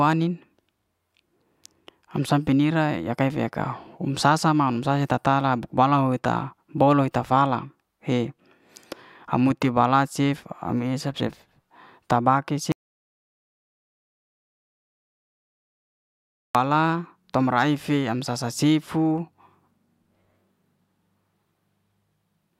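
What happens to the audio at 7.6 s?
At 7.6 s the speech carries on intact, with no dropout, click, distortion or other fault at that moment.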